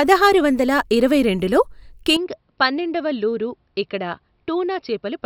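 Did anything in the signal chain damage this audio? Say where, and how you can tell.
Yes. An input switched to a poorer device at 2.17 s, just after "వందల ఇరవై రెండులో", and the speech stays degraded to the end. From that point nothing is present above 5.6 kHz, so the voice turns dull and boxy. The level drops by roughly 10 dB, and a faint new noise floor appears well below the speech. The change is instant, with no gap, which points to the driver stage, likely the system rerouting capture to a narrower-band microphone mid-recording.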